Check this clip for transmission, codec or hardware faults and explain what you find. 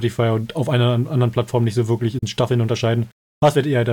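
Two faults are audible in this speech clip: a grainy quantisation texture throughout, and one short broadcast dropout.

Low bit depth without dither runs through the whole clip. A gritty, rasping distortion clings to the speech and rises and falls with it, roughest on quiet syllables and decaying tails, with the error sitting roughly 40 dB below the signal. The likely cause is rounding to about 8 bits with no dither. Because the error then tracks the waveform instead of forming a steady hiss, it sounds like grit in the sound itself.

A digital broadcast dropout occurs from 2.18 to 2.23 s, right after "nicht so wirklich". The sound fades out over about 8 ms and leaves a silent hole of roughly 50 ms before the programme resumes. The receiver muted because it lost the signal or got a corrupted frame, and it stayed muted until valid data returned. The gap's length fits a single lost frame of about 32 ms plus the fades. 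Whatever was sent during that hole is missing.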